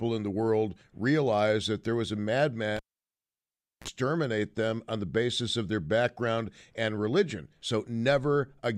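At 2.77 s, after "that there was a", a cable is pulled and plugged in. A pop opens 1.07 s of near silence. Then comes a 41 ms burst of 60 Hz mains buzz while only the tip connects, and a second pop at 3.88 s. The waveform shows two spikes around a flat gap, and the spectrogram shows a narrow 60 Hz band.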